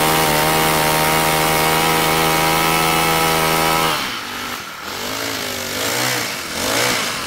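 Throughout the clip, a filter restarted on every block produces a steady 188 Hz buzz that tracks signal level, which fits a 256-sample block resetting its state each time.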